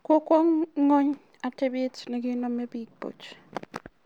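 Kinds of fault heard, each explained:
No technical faults can be heard in this speech.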